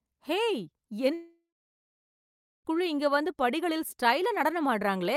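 Speech clip with a gap from 1.13 to 2.67 s: the sound smears into a fading buzz, then goes quiet for about 1.2 s before picking up again with roughly 1.5 s of speech gone. That's most likely a long network dropout, with the receiver concealing the hole.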